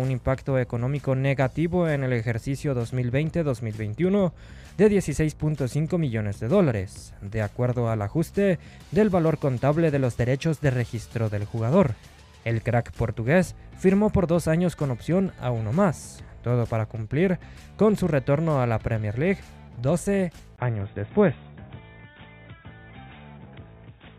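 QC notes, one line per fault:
20.56–24.18 s, input switched to a poorer device: A gap of 20 ms opens at 20.56 s. The sound then turns dull and boxy until the end. Nothing is left above 3.8 kHz, so the air and crispness vanish at once. The level shifts by around 5 dB. A new background noise sits roughly 50 dB under the signal. The change was likely a move to another microphone or a headset's narrower call profile.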